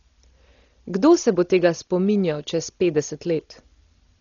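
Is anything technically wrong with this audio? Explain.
Yes. Throughout the whole speech clip, everything above 7 kHz is gone and tonal parts carry a rough, fluttering haze. That's likely heavy Dolby Digital compression, consistent with a starved bitrate around 32 kbps: the encoder narrows the band, leaves many frequency lines unfunded, and the decoder patches them with noise.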